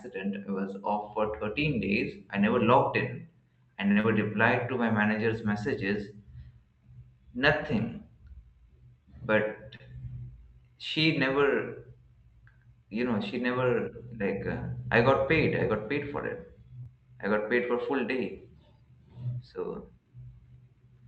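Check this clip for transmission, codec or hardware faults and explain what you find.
Two kinds of network fault show up in this speech, both typical of a call carried over Opus, where the audio stops at about 8 kHz and carries light coding noise consistent with roughly 32 kbps.

Short stall from a late packet, at 3.91–3.98 s, right after "never logged in I", and again at 9.76–9.82 s. A packet arrived late, the jitter buffer ran dry, and the receiver held the last sound for about 49 ms and then 35 ms before resuming where it left off. Nothing is lost, but the sound hangs briefly with a faint buzzy stretch, and everything after shifts slightly later.

Short concealed packet loss, at 4.00–4.06 s, still just after "never logged in I", and at 16.83–16.87 s, just before "I got paid for". Here audio never reached the decoder in time, about 40 ms and then 20 ms. The receiver extrapolated from the preceding sound for 35 ms and 21 ms and crossfaded back into the real signal. 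Each gap comes through as a quick smear or wobble, and a brief consonant there can drop out.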